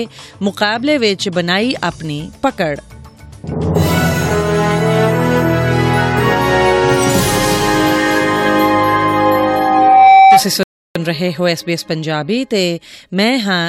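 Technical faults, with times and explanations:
9.16 to 10.44 s, loudspeaker feedback squeal: a 772 Hz tone swells over about a second to roughly 10 dB above the sound, a bright horizontal line on the spectrogram.
10.63 to 10.96 s, rebuffering stall: the player starved and paused, adding 0.32 s of flat-line silence in the waveform before playback resumes exactly where it stopped.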